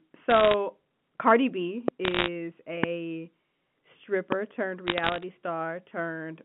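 Bit errors on a digital phone line at 0.30–0.54 s, 2.05–2.28 s and 4.87–5.23 s flip occasional bits in the logarithmic samples, so the speech carries a scatter of sharp ticks and crackle, at an error rate of around one percent or less. Loud pops at 1.88–1.90 s, 2.84–2.86 s and 4.32–4.34 s each add a single sharp pulse around 20 dB above the speech, likely from a voltage step such as a plug, switch or static discharge, while the speech continues underneath.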